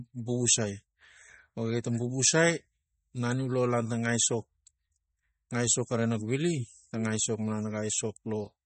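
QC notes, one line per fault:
Throughout: MP3 compression, likely at a low bitrate around 32 kbps. Nothing survives above 8.4 kHz, so the speech sounds dull and watery, with swirling on sibilants. A spectrogram shows a hard ceiling at 8.4 kHz and flickering, patchy upper bands.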